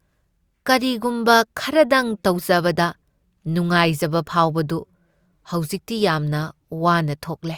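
No technical faults can be heard anywhere in this speech recording. Nothing in the sound breaks, drops out or jumps at any point.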